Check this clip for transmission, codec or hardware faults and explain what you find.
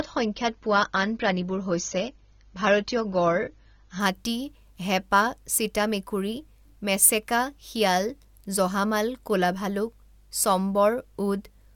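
One fault shows up: an adaptive stream starting at a low bitrate. From 0.0 to 4.0 s the speech sounds dull, with nothing above 6.9 kHz and heavier codec artefacts. At 4.0 s the treble returns abruptly with no gap. The player began on a cheap rendition to start quickly, which fits an AAC stream of around 24 kbit/s, then switched once it had measured the connection, consistent with a step up to about 96 kbit/s.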